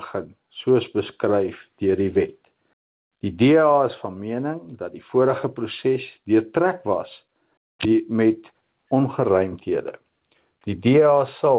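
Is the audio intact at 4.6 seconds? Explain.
No, gain pumping runs throughout, including 4.6 s: gain set far too high likely drives a fast limiter, so the gain swings by about 10 dB, within the 4 kHz call band.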